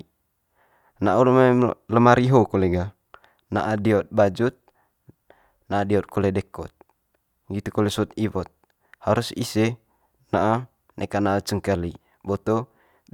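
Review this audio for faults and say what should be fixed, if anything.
Nothing in this speech recording needs fixing. No faults turn up anywhere in it, so there is nothing to prevent.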